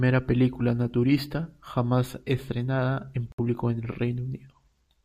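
Speech, interrupted once just after "naturista jamás estrenada en": from 3.32 to 3.40 s the audio drops to silence for 62 ms, a flat waveform gap and a blank vertical stripe on the spectrogram, before resuming. This is likely a Bluetooth stall, with the headphones' buffer running dry.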